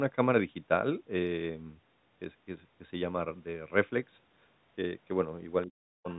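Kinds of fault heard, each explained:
Speech suppressed in double talk: Right at the tail end, from 5.66 to 6.08 s, the speech gets shoved way down, roughly 40 dB at its deepest, for about four tenths of a second. It's the familiar move of an echo canceller that hears both ends at once, can't pull the near talker apart from the loudspeaker echo, and just turns everything down. Overlapping talk from the far side is the likely trigger here.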